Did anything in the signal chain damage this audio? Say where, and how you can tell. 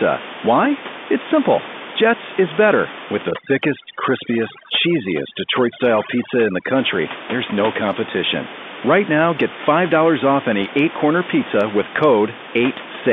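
Yes: overdone noise removal in call processing, 3.31 to 6.75 s, before "there's no competition". Background drops to twinkling near-silence, unlike steady codec band-limiting.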